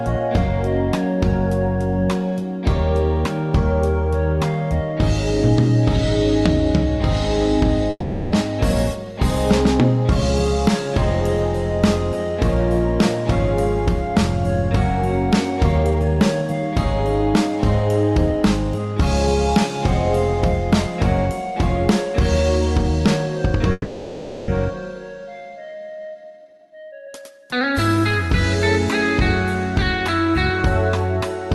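From 7.90 to 8.34 s, and again from 23.72 to 24.50 s, there is a call audio freeze. The last sound is stretched into a fading buzz or hiss for 0.42 s and then 0.76 s, likely because packets were held up and the jitter buffer ran dry. Unlike a dropout, nothing is lost: the audio resumes exactly where it stopped.

Jitter buffer speed-up follows each freeze, at 15.78 to 19.28 s (112% speed, roughly 0.4 s trimmed) and 26.07 to 28.29 s (133%, roughly 0.7 s). Pitch-period slices are cut to shed the extra delay, so the audio sounds hurried but, unlike a resampling error, keeps its pitch. Throughout, the call codec limits the bandwidth to about 12 kHz.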